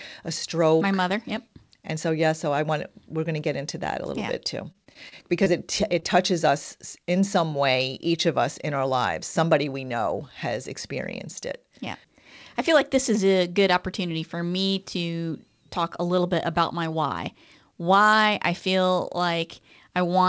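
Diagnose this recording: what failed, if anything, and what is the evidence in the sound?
The failure is at the network stage of the call path, with repeated packet loss (robotic sound) from 4.72 to 5.48 s, right after "little yeah bit too". Five separate holes open within that span, the longest about 29 ms, with roughly 80 ms of audio missing in total. The receiver patches each hole by extending the preceding waveform, and about 13% of the stretch ends up synthesized. Gaps this closely spaced break the speech into choppy fragments.

A second network fault, short concealed packet loss, follows from 6.00 to 6.04 s, just before "touches us in some". About 20 ms never arrived in time. The decoder filled the hole by continuing the last sound, pitched if voiced and noise-shaped if not, then cross-faded back into the real signal. The result is a brief smear or wobble. The band limit at 8 kHz is simply the wideband call codec, consistent with G.722 at 64 kbps.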